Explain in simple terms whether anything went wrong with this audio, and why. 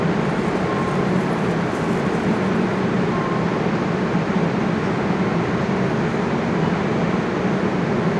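Nothing went wrong here.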